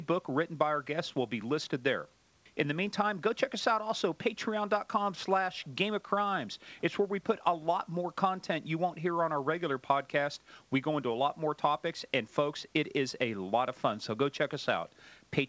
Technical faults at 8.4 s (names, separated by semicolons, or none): none